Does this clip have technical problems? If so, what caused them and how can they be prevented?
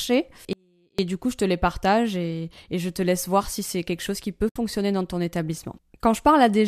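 Yes. From 0.53 to 0.99 s there is an audio dropout to a faint residue. The signal vanishes abruptly for about 0.45 s, leaving only a trace roughly 35 dB down. The likely cause is a broken feed upstream while the downstream path stayed live. A pause or fade would taper rather than snap off. Secure cabling and connections, and monitor the input, to prevent it.

From 4.49 to 4.56 s there is AAC frame loss with muting. A 70 ms hole, which fits about seven 10 ms frames of the lightly compressed low-delay AAC stream, fades out and back in with softened edges, unlike the hard edges of the dropout. Forward error correction or packet-loss concealment prevents it.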